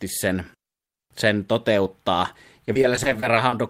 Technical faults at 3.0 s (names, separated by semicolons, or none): repeated packet loss (robotic sound)